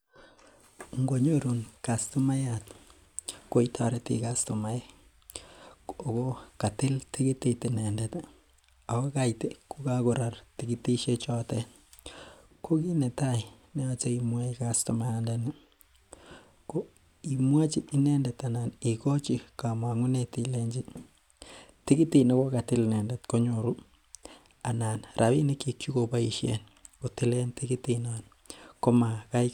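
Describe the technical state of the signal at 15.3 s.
At 15.3 s the speech signal is intact, with no audible fault at that moment.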